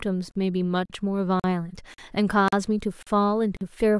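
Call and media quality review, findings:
Gap between chunks, speech track: seven holes of about 43 ms at 0.31, 0.85, 1.40, 1.94, 2.48, 3.03 and 3.57 s, spaced roughly 0.54 s apart. Looks like 0.5 s chunks, each followed by inserted silence, so nothing's dropped, just pushed later at every join. Probable component: chunked playback or decoder padding. Gap length would fit a fixed 1024- or 2048-sample block, depending on rate. Worth checking the chunk boundary handling first.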